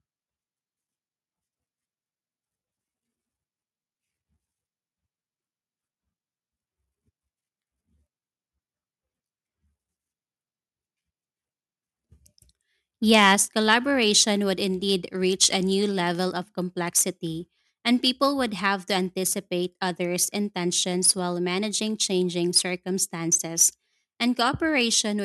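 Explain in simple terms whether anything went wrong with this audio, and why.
Something did go wrong, around the 13-second mark. The microphone's input was likely set too high, so the loudest speech pushed past the highest level the recording hardware can capture. This is microphone overload, and it happens from 13.14 to 13.33 s and again briefly from 13.72 to 13.74 s. At those moments the tops of the sound waves are sliced off flat, which gives the speech a harsh, crackly, distorted edge.

Right after the first overload, at 13.35 s, the microphone volume was stepped down in one go, likely by the calling software reacting to the distortion. From that point the speech and any background sound become quieter all at once instead of fading smoothly. Even so, the level is still not quite low enough, because the second, shorter crackle at 13.72 s follows soon after.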